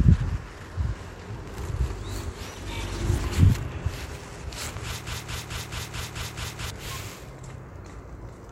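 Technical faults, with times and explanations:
5.07 to 6.70 s, broken-record loop: A fragment of about 217 ms repeats exactly, back to back, eight times. The repeats are identical, so the sound stutters mechanically instead of moving forward. The likely cause is a stall in the player, encoder or stream, which kept resending the last piece it held. Whatever audio belonged in those 1.6 seconds is lost. The sound resumes at 6.70 s.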